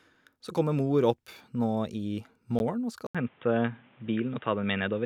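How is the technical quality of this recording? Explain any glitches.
The recording has two glitches. At 2.59 s, a block of digital silence: most likely the output buffer went unfilled, leaving an 11.6 ms hole, which fits a 512-sample buffer, heard as a sharp tick. From 3.07 s to the end, the input likely switched to a poorer device: after an 80 ms silence, the speech loses everything above 3.8 kHz and sounds dull, with a faint new background noise about 35 dB below the speech, while the overall level stays about the same.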